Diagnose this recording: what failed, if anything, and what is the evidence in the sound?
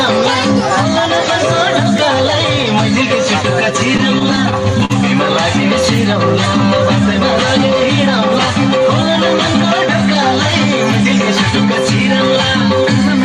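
Network jitter buffer: repeated stalls (stutter) from 3.97 to 4.92 s. Six brief holds, longest 45 ms, extend the last sound while late packets catch up.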